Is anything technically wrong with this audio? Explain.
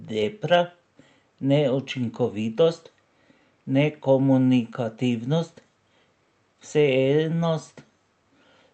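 No, nothing is technically wrong with this audio.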